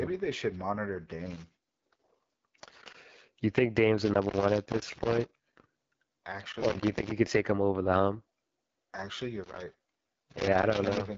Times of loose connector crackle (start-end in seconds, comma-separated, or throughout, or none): 1.26-3.05, 3.98-5.77, 6.52-7.11, 9.44-11.17